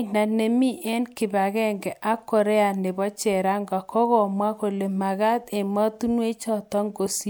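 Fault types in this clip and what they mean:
No technical faults can be heard anywhere in this speech recording. There is nothing here to list by type.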